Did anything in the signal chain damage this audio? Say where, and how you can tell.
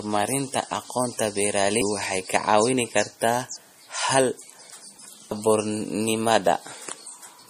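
Yes. MP3 compression is audible throughout the speech, at the codec stage. The treble stops abruptly at 15.2 kHz, and the damage is plainly audible: a watery, swirling texture and a metallic edge on sibilants. The likely cause is a lossy encode at a low rate, fitting roughly 40 kbps. With so few bits, the encoder cut the top band and dropped weak frequency lines, which flicker on and off between frames.

Audio missing between chunks occurs at 3.56 s, 5.31 s and 7.06 s, at the driver or buffer stage. At each point about 0.3 s of speech vanishes, and the sound on either side is butted together with no gap, so the speech jumps forward. The regular spacing likely comes from a recorder working in blocks of about 2 s and losing a piece each time it closes one block and opens the next.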